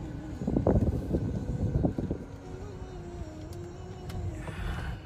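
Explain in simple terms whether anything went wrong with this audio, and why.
Nothing went wrong with this audio; no faults are audible at any point in the recording.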